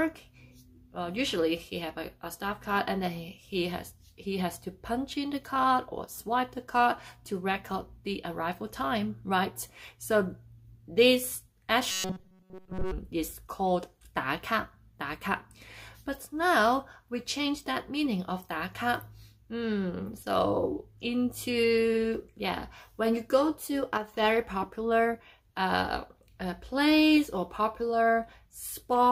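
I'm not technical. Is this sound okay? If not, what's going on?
No. From 11.91 to 12.92 seconds there is robotic sound from repeated short buffers. The sound becomes a stiff, metallic buzz, likely from tiny snippets repeating. At 23.97 to 24.14 seconds there is a sudden gain jump. The level drops abruptly, with no fade, likely from a volume setting changing instantly.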